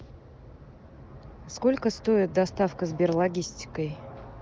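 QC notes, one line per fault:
No faults heard; wideband voice coding at 23.05 kbit/s.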